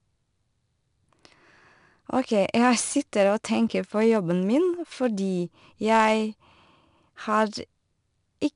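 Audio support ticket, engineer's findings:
Gritty hiss riding every loud syllable, harsh edges on attacks, nothing above 10.5 kHz, throughout. 4-bit ADPCM compression; step size lags transients. Band limit fits a low sample rate.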